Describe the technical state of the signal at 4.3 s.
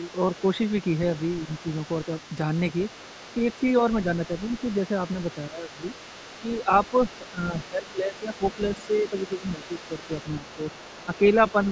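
At 4.3 s you're inside a stretch of speech suppressed in double talk, running from 3.80 to 4.52 s. The talker's level sags briefly while the far end is also talking, with the dips adding up to something like a sixth of a second and the deepest one only a few dB. It likely happened because the echo canceller couldn't tell the near talker from the loudspeaker echo during the overlap, so it pulled both down together.

Underneath that, the other side's voice is leaking through faintly, and it does so for the whole clip, not just around this point. It sits well below the main talker, roughly 25 dB down. That's likely because the far end is playing on the device's loudspeaker and getting back into the microphone, with the echo canceller missing part of it. Right at 4.3 s this residual echo overlaps the ducked speech, so the two are tangled together.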